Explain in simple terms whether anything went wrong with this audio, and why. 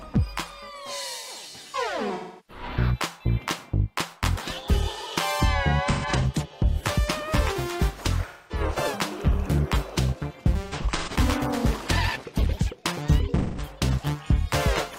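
AAC frame loss with concealment occurs at 2.14–2.63, 5.90–6.26, 8.28–8.61, 10.63–11.16 and 13.37–13.69 s. Chunks of the compressed stream went missing, so the player filled each gap by guessing from the last good sound. That leaves a smeared, noisy or phasey patch. At 5.90 and 10.63 s, the gaps come in scattered bursts.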